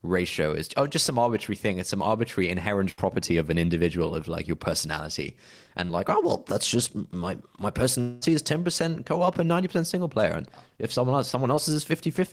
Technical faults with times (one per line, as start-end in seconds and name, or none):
2.91-2.99 burst of packet loss
5.85-5.91 short concealed packet loss
8.01-8.23 long network dropout
11.55-11.59 short concealed packet loss